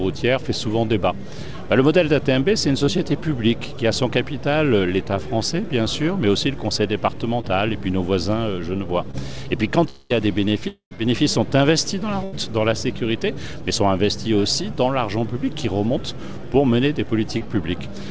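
At 2.86, 7.41 and 9.11 s, and again at 17.38 s, there is short concealed packet loss. About 20 ms of audio failed to arrive each time, and the receiver bridged it by extending the preceding sound. Each one is a quick smear or wobble.

From 9.89 to 10.12 s and again from 10.68 to 10.93 s, the sound stretches into a fading buzz or hiss for roughly a quarter of a second. The second time, it settles into about 110 ms of silence before resuming further on. This is likely a long network dropout. It differs from the short losses in that the fill decays audibly and part of the audio is missing when it returns.

At 12.24 s, a burst of packet loss removes about 80 ms. The last sound is held and turned down for about a tenth of a second, then the audio resumes past the missing section. It is longer than the smears.

Throughout, nothing is heard above 8 kHz, which fits a G.722 call path.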